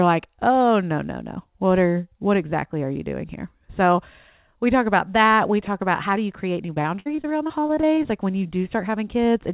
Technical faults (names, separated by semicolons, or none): repeated packet loss (robotic sound)